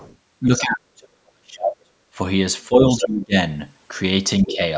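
A short stretch of call speech with two echo-canceller problems. The other side's voice leaking through turns up faintly at 0.0 to 0.16 s (about 30 dB under the talker), nearly as loud as the talker at 3.01 to 3.08 s, and in between at 4.49 to 4.57 s. That's most likely loudspeaker sound the canceller didn't fully scrub from the mic. There's also speech suppressed in double talk: the talker dips hard at 0.47 to 1.08 s and 1.3 to 1.92 s (down roughly 35 to 40 dB at worst), less at 2.68 to 3.36 s, and mildly at 4.45 to 4.6 s. Those dips line up with the far side talking, so the canceller likely couldn't tell the two apart and ducked everything.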